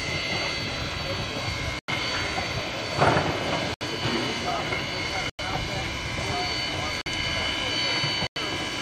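At 1.79, 3.74, 5.30, 7.01 and 8.27 s the sound drops out abruptly for 60 to 110 ms. That's corrupt frame muted: damaged compressed frames got rejected and silence was substituted, each gap spanning a few frame lengths, with timing kept intact.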